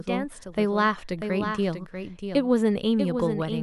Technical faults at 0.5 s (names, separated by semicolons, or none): doubled audio track